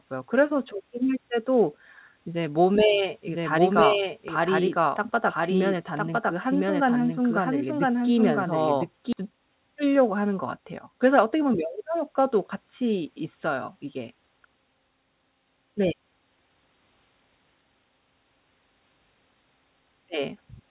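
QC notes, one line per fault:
3.27–9.13 s, doubled audio track: an equally loud, dry copy trails about one second behind and cuts in and out abruptly, likely from a second, slower capture path.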